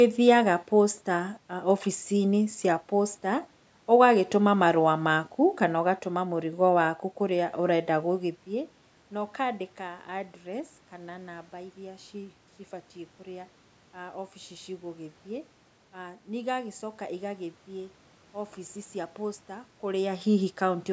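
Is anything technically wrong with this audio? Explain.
No, nothing is technically wrong with this audio.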